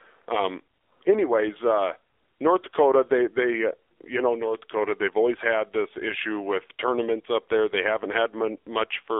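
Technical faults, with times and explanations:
Throughout, AMR narrowband mobile codec: the speech is confined to a 300 Hz to 3.6 kHz line band, so nothing bright survives. Within it the voice turns plainly buzzy and synthetic, because an 8 kHz vocal-tract model rebuilds each 5 ms from a few pulses, a coarseness that fits a low mode around 7.4 kbps. Simple telephone band-limiting would sound thin but clean; this buzz is what marks a speech codec.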